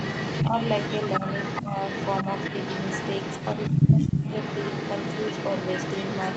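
From the start to the end, an echo leak is audible: a delayed copy of the speech trails by about 120 ms at roughly equal loudness, likely from residual loudspeaker echo. The speech dips at 0.47–0.53 s and 1.2–1.27 s, more deeply at 1.62–1.71 s, and drops hardest from 3.69 to 4.26 s, likely speech suppressed in double talk.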